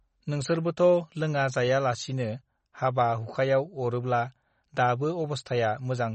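Throughout, the speech is dull above 8.3 kHz and watery, with swirling s sounds, likely MP3 compression at a low bitrate near 32 kbps, unlike plain low-pass filtering, which leaves no swirl.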